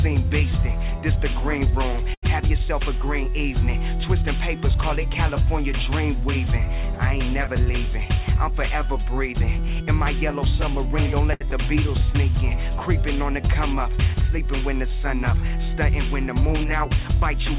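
At 2.14 to 2.25 s a packet arrived late and the jitter buffer ran dry, causing a short stall from a late packet. The receiver held the last sound for 85 ms until the packet came, then resumed from the same point, so nothing is lost but the sound hangs with a faint buzz or dip. The same happens at 11.33 to 11.43 s, stretched by 72 ms.

From 7.48 to 10.06 s the buffer held more audio than its target, and the receiver triggered a jitter buffer speed-up, trimming pitch-period-sized slices repeatedly, about 70 ms in total. Playback runs at 102% with unchanged pitch.

At 11.51 to 11.53 s, 20 ms never reached the decoder. This short concealed packet loss was bridged by extending the preceding sound and blending back, heard as a brief smear. Throughout, nothing sounds above 4 kHz, which fits the G.711 A-law call codec.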